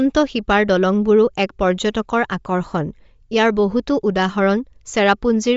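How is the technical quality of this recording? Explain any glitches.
The technical quality is compromised throughout this speech recording. Likely Bluetooth LC3 compression at a low bitrate discards and noise-fills upper detail, leaving nothing above 7.7 kHz and a plainly audible breathy, grainy edge.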